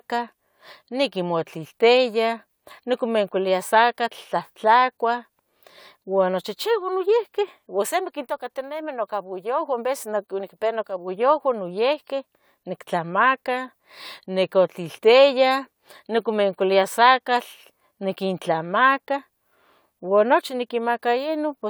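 No technical faults are audible anywhere in this speech.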